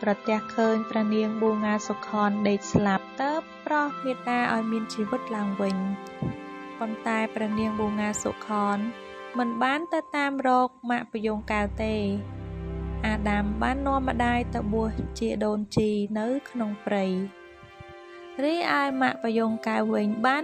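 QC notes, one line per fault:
0.0–4.0 s, adaptive stream starting at a low bitrate: dull and smeary, with nothing above 7.2 kHz, which fits a low-bitrate MP3 start. Quality then jumps abruptly with no gap, unlike a rebuffer.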